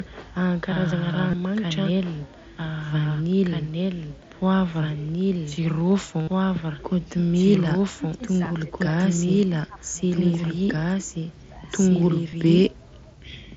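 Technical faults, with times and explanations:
Throughout: doubled audio track. A second full-band copy of the speech runs about two seconds behind the first at roughly the same level, with no decay or room colour. Likely an edit or a slower capture path mixed the same audio in twice.
1.31 s, 6.22 to 6.28 s, 12.30 s: concealed Bluetooth headset packet loss. Short gaps of 22.5 ms, 52.5 ms and 22.5 ms were filled by repeating recent waveform. The longer one sounds like a brief buzzy held tone, with a slight warble as real speech resumes.
4.11 to 4.28 s: echo leak. A faint delayed copy of the speech surfaces about 284 ms late, far below the main speech. Likely a loudspeaker on the far side leaked into its microphone past an incomplete echo canceller.
6.73 to 11.56 s: speech suppressed in double talk. Seven dips at 6.73 to 7.07, 7.68 to 8.41, 8.64 to 8.79, 9.15 to 9.21, 9.49 to 9.95, 10.32 to 10.45 and 11.33 to 11.56 s pull the speech down by up to about 15 dB. 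The likely cause is an echo canceller ducking during overlapping talk. The wideband mSBC headset link carries the speech with slight graininess.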